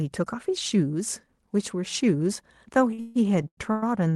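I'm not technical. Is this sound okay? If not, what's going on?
No. From 2.91 to 3.83 s there are repeated stalls (stutter). The speech kept arriving late, so playback ran dry six times, and the last sound was stretched to fill each gap, the longest about 0.15 s. Nothing is lost, but the speech drags and stutters.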